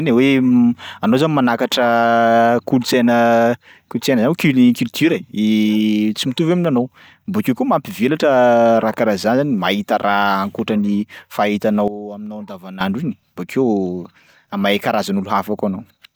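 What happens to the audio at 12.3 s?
A sudden gain jump runs from 11.88 to 12.81 s. The speech and its background noise drop together by about 13 dB in a single step and snap back just before "iny bokeo", likely from a gain change applied without any ramp.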